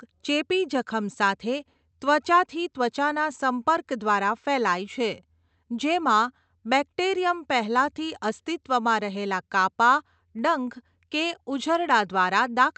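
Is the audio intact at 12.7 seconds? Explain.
Yes, the speech at 12.7 seconds is intact, with no dropout, glitch or other fault at that moment.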